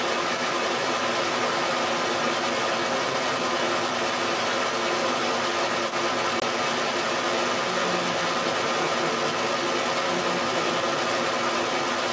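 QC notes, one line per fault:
Throughout: other side's voice leaking through. A second, louder voice sits with the main speech for the whole clip, clearly audible. It is likely loudspeaker sound that the echo canceller left in the microphone. Unlike crosstalk, it is processed, not a steady clean line.
6.40 to 6.43 s: packet loss on an ADPCM call. A hard-edged 20 ms silence, which fits a single lost packet, is followed by speech returning slightly distorted. The decoder's predictor and step size lost sync with the sender and need tens of milliseconds to recover. A plain dropout would resume cleanly.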